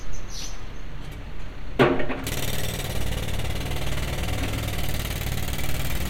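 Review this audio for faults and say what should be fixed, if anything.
Nothing stood out on listening to this recording of sounds, so there is nothing here that needs fixing.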